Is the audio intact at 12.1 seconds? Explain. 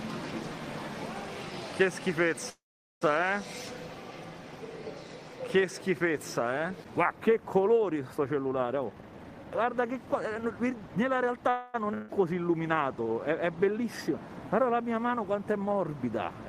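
No. From 11.94 to 12.10 s the sound stalls into a sustained, fading continuation of what came just before, then jumps ahead. This is a burst of packet loss: about 140 ms of audio never arrived, and the receiver filled the gap by extending and attenuating the last sound.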